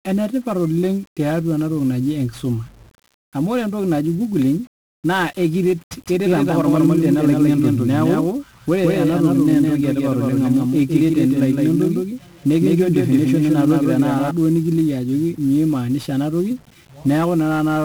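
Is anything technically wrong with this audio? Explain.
Yes, there are two faults.

1-bit DFPWM compression runs through the whole clip, and the damage is heavy. This coding keeps a single bit per sample, and each bit only nudges an adaptive level up or down, so the waveform is rebuilt coarsely. The data rate of 48 kbps fits one bit per sample at 48 kHz. The result is dense broadband quantisation noise: the speech sounds fuzzy and crackly, and its upper frequencies sink under a constant hiss.

A doubled audio track appears from 5.93 s to 14.31 s. A second full-band copy of the speech sits roughly 150 ms behind the first, at about the same loudness. It is likely caused by the sound being captured again through a slower path. The copy is dry, with no decay or room colouring, so it sounds like a clean, slapback-style echo. It cuts in and out abruptly at those two times.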